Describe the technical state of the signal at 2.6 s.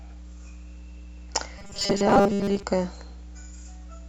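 Audio arriving too seldom, likely covered by repeating short buffers, puts 2.6 s inside the robotic sound from 1.58 to 2.63 s. Most of the audio is repeated, and the repeats impose a rigid 200 Hz metallic buzz, which fits buffers about 5 ms long. A ground loop or nearby transformer also couples in mains hum, a steady 60 Hz tone about 20 dB below the speech.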